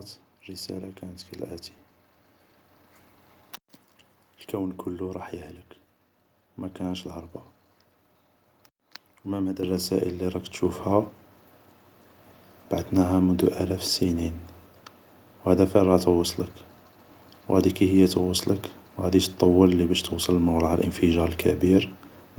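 At 9.63, 10.65, 13.35 and 20.73 s the microphone volume stepped up by about 7, 4, 1 and 2 dB, lifting speech and background together in abrupt jumps.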